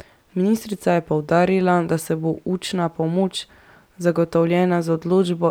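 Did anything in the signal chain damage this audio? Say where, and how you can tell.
No, nothing in this speech stood out on listening as damage from any stage of the signal chain.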